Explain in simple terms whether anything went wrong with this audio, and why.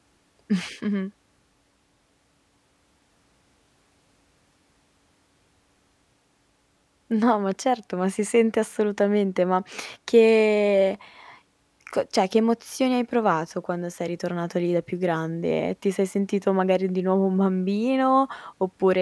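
Nothing went wrong that I could hear; listening closely, no part of the recording stood out as a problem.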